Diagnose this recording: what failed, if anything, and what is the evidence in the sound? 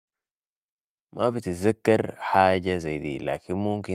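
Nothing failed in this recording. The speech comes through with no audible evidence of trouble at any stage of the chain.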